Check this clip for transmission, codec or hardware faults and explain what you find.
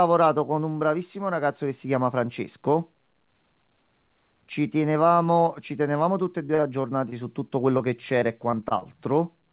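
Two bursts of repeated packet loss (robotic sound) break up the speech, from 6.46 to 7.82 s and again from 8.20 to 8.87 s. Packets arrive late or not at all several times in quick succession. Each hole, none longer than about 38 ms, is patched by stretching the previous sound, so the speech turns choppy and robotic. Unlike a single dropout, it is the rapid run of concealed gaps that gives the buzzy, mechanical texture. The band stops at 4 kHz, which points to a narrowband call codec.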